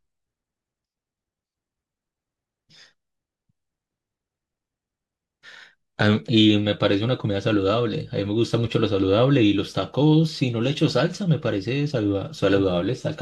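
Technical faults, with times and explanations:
No technical faults can be heard anywhere in the speech; the signal holds steady, with no disturbance to its level, continuity or timing.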